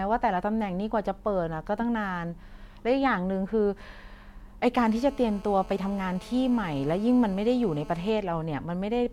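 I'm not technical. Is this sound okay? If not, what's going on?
No. From 4.79 to 8.10 s a steady, raspy buzz sits under the speech. This is GSM phone buzz: a nearby mobile on a call, pulsing 217 times a second into the audio circuit.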